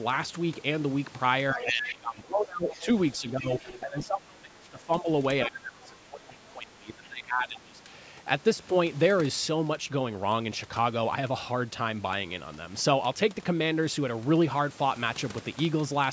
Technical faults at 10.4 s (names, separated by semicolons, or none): none